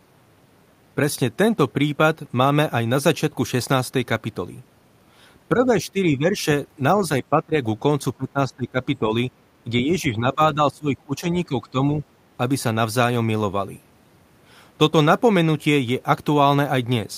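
Between 5.55 and 11.82 s the speech level drops five times: 5.55 to 6.44 s, 7.3 to 7.57 s, 8.17 to 8.79 s, 9.0 to 9.12 s and 9.64 to 11.82 s. Depth varies from a slight sag of about 5 dB at 9.0 s to around 20 dB at 7.3 and 8.17 s. The longest stretch, from 9.64 s, is pulled down by about 15 dB. This is likely speech suppressed in double talk, where an echo canceller mistakes the local talker for loudspeaker echo and turns it down while the far side speaks.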